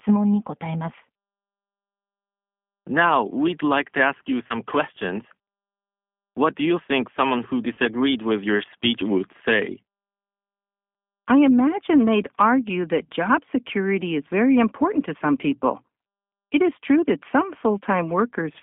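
Throughout, the speech is carried by the G.729 codec, here the G.729A variant, at a rate consistent with 8 kbit/s. The line passes only about 200 Hz to 3.5 kHz, so the low end is thin and the upper consonant detail is gone. The codec rebuilds each short frame from a vocal tract filter, a pitch predictor and a sparse pulse excitation, and that damage is plainly audible as a rough, slightly synthetic buzz on the voice.

VoIP packet loss concealed by the speech codec occurs twice. From 4.47 to 4.55 s, about 30 ms of audio is missing, which fits a single lost packet. The decoder fills the gap by extending its last pitch and filter state with falling gain, giving a brief stretched, fading smear. The second loss, also about 30 ms, runs from 7.74 to 7.79 s, between "you think someone who" and "with your speech would", with the same stretched, fading sound before the voice recovers.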